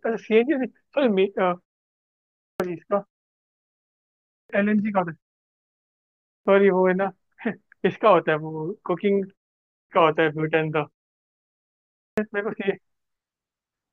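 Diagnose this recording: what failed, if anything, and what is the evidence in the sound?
The failure is at playback: a clipped start after a pause. At 2.3, 4.19, 6.17, 9.61 and 11.85 s the speech resumes abruptly out of silence, each onset missing roughly 0.28 to 0.33 s of its opening sound, after pauses of 0.32 to 1.17 s. The output path powers down or loses lock during quiet and swallows audio while waking. Ordinary muted pauses would silence only the gaps; here the speech itself is cut.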